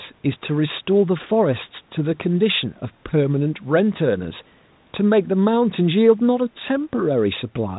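This speech clip has no technical faults. It carries the narrow band of a G.711 telephone line, with nothing above 4 kHz, and the call microphone processing has trimmed away the lowest bass.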